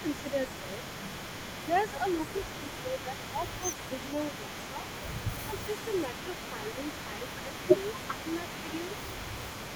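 From the first moment to the end, a fainter copy of the speech trails the original by 387 ms at about 10 dB down. This is an echo leak, likely from a loudspeaker on the far end whose echo canceller let part of the pickup return. A spectrogram shows each syllable's harmonic pattern repeated slightly later and paler.

Between 0.23 and 0.79 s, 2.59 and 3.63 s, 4.04 and 4.84 s, and 6.51 and 7.54 s, the speech dips by a few decibels in short patches. This is speech suppressed in double talk, likely where the canceller confused the talker with echo and attenuated both. The waveform envelope shows shallow notches there.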